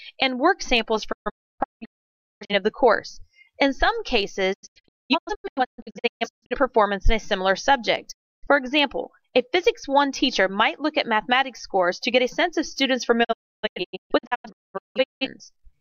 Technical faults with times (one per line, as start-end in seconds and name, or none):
1.11-2.53 digital broadcast dropout
4.52-6.55 digital broadcast dropout
8.11-8.47 digital broadcast dropout
13.23-15.27 digital broadcast dropout